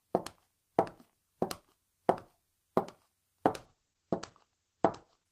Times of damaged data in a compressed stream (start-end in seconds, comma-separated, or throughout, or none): none